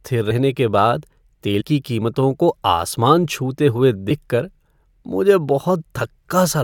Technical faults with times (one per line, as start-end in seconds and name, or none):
0.30 compressed frames skipped
1.60 compressed frames skipped
4.09 compressed frames skipped
5.80 compressed frames skipped